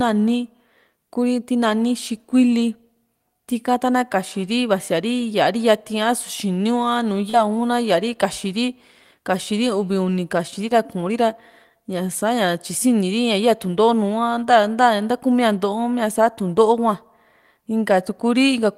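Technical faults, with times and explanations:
7.29–7.35 s, short concealed packet loss: 40 ms of speech arrived too late. The decoder stretched the preceding sound over it, leaving a flat, repeated-looking patch on the spectrogram.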